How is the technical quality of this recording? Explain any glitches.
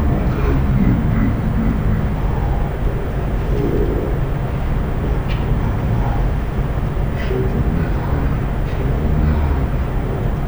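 The recording is badly compromised: the speech runs at half speed throughout because of a stereo read as mono fault. Interleaved left and right samples are being played back one after the other as though they formed a single channel, so every second of audio is stretched to two and the voice drops a full octave, 12 semitones down. On a spectrogram, the harmonics appear squeezed into the lower half, with a fainter mirrored copy in the upper half. The waveform looks stretched to twice its proper length.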